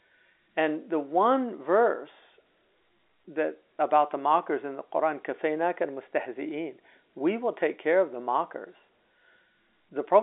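No technical faults can be heard in this speech, which carries the narrow telephone band of G.711 telephone coding, roughly 250 Hz to 3.6 kHz, with the line behaving as a normal 64 kbps A-law connection should.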